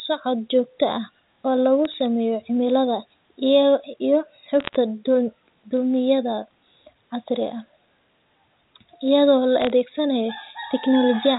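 Bit errors on a digital phone line tick sharply at 1.85–1.94 s (between "joogto ah oo lagu" and "sameeyo cimilada"), 4.60–4.76 s and 9.62–9.70 s. Flipped high bits corrupt single samples, drawing lone waveform spikes and thin vertical spectrogram lines.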